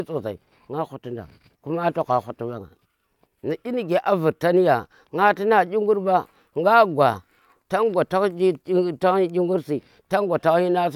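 No technical faults can be heard anywhere in the speech.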